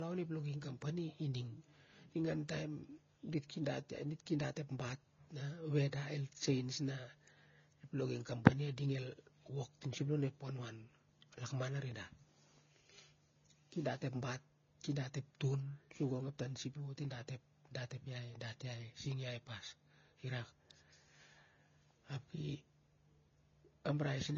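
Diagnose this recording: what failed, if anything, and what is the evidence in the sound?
Throughout the speech, nothing survives above about 7.3 kHz, and two distinct kinds of codec artefact overlap. This is a codec-stage fault, transcoding between lossy codecs, likely a low-rate AAC encode re-encoded as Vorbis, which keeps the lower cut-off and stacks both codecs' damage.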